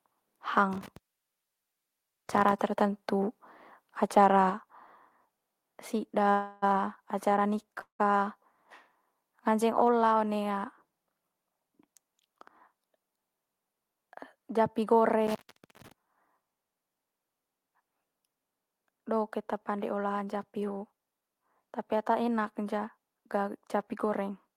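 From 0.73 to 2.53 s an intermittent contact breaks the speech for about 1.33 s, with crackle at the edges and faint hiss while the line is open. The crackle sets it apart from a clean digital dropout. At 4.50 s the level of speech and background together falls by about 4 dB in one step and stays there. This is most likely the call software turning the microphone volume down. Because it is a single held step, it is not a fade or a momentary dip. Call audio freezes follow at 6.30 to 6.64 s and 7.81 to 8.01 s, likely from a jitter buffer running empty. The last sound is held as a fading buzz or hiss for about 317 ms and then about 180 ms, the second trailing into about 110 ms of silence. Speech resumes where it stopped, so nothing is lost, unlike a cut. A second intermittent contact at 15.27 to 15.92 s opens the line for about 0.50 s, again with crackle and hiss.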